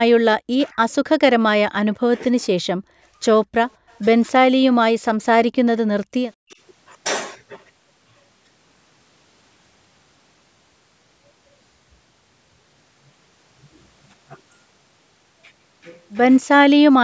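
Speech suppressed in double talk first appears at 0.53–0.78 s, 2.0–2.36 s and, more gently (about 15 dB), at 2.99–3.18 s. The voice dips by as much as about 40 dB, likely because an echo canceller treated overlapping talk as echo. These show as notches in the waveform envelope.

Echo leak follows at 3.68–3.99 s. A very faint copy of the voice, about 40 dB down, returns 207 ms late, likely uncancelled loudspeaker pickup. It appears as a weak, offset repeat of the spectrogram's harmonic bands.

Background gated by the echo canceller overlaps it at 3.77–3.88 s. The room sound drops about 33 dB for roughly a tenth of a second, leaving a brief blank gap in the spectrogram's noise floor.

Double-talk suppression returns at 4.26–6.61 s, with about a second of heavily attenuated voice, and again at 16.41–17.02 s. The spectrogram stays empty above 8 kHz throughout, as expected from the call's microphone processing.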